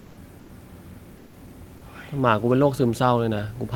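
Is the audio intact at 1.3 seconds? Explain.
No. From 1.21 to 1.33 s, about 120 ms, comfort noise replaces the background: a steady, featureless hiss about 2 dB quieter, likely from discontinuous transmission such as Opus DTX. On a spectrogram the floor turns smooth and uniform, and the waveform shows a flat, even band.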